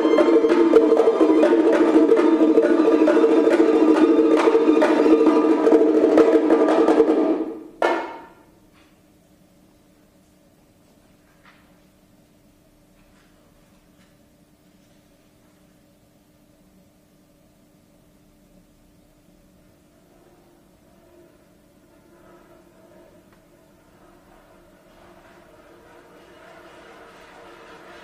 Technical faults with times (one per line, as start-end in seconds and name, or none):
none